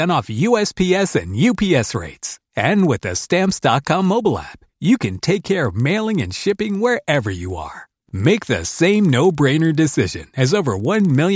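Speech runs through the whole clip with a 20 Hz buzz under it. The resampler restarted on every block, which fits a 44.1 kHz to 16 kHz conversion. Each 50 ms block edge leaves a small error. The ticks merge into a buzz wherever the speech is active.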